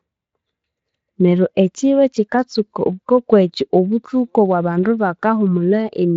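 No faults can be heard in the recording: it has passed through the Speex codec with only light coding colouration, and its bandwidth stops at about 7.6 kHz.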